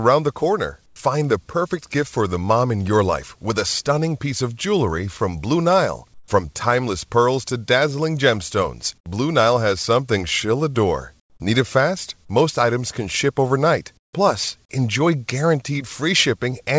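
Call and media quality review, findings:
Comfort noise in place of the background at 0.86, 6.14, 8.98, 11.20 and 13.97 s (80–200 ms). Background becomes flat, featureless hiss, about 10–13 dB quieter. Likely DTX comfort noise at receiver. Not a gate: gap isn't silent.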